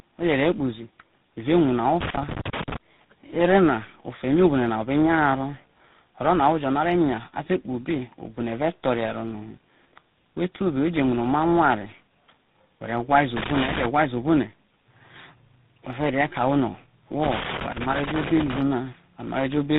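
Throughout the speech there is tandem speech coding. The call passed through four separate speech coders in a row, CVSD twice, then G.726 at 24 kbit/s and finally GSM full rate, with G.711 links between them. Each coder re-encoded the previous one's errors, so the voice sounds rougher and more warbly than any single codec would make it, and nothing is left above 3.8 kHz. Unlike plain band-limiting, the artefacts themselves pile up, not just the missing treble.

Loose connector crackle breaks in at 2.01 to 2.77 s, 13.37 to 13.86 s and 17.23 to 18.61 s. A worn contact was making and breaking rapidly, chopping the signal into irregular scratchy bursts. Its uneven, clustered texture sets it apart from the brief clean gaps of a digital dropout.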